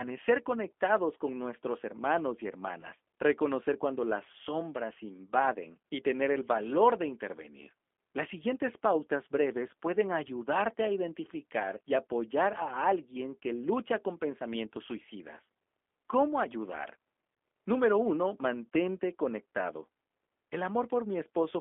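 Throughout, the speech sounds slightly rough and synthetic, confined to roughly 250 Hz to 3.5 kHz: G.729 codec damage, an 8 kbit/s VoIP codec rebuilding the voice from a modelled vocal tract and pitch.

From 2.81 to 2.86 s, between "con nuestros hermanos y" and "reconocer cuando las sombras", the voice briefly stretches into a fading tone or noise. This is VoIP packet loss concealed by the speech codec: about 20 ms of audio went missing, consistent with one lost packet, and the decoder extrapolated from its last frames.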